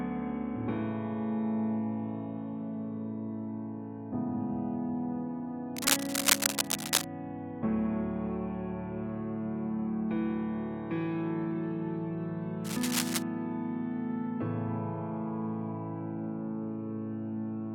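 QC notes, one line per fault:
5.76–7.04 s and 12.64–13.23 s, cable scratch noise: dense, uneven scratching bursts over the sound, about 5 dB above it then about level with it, likely from a worn cable or connector moving.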